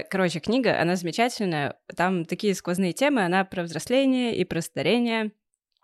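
No technical faults are audible anywhere in the recording.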